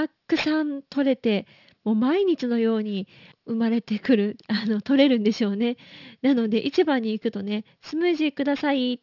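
Throughout, sibilants turn gritty and metallic against an edge at 6 kHz. This is aliasing: unfiltered energy above that fold point mirrored back, roughly 20 dB down.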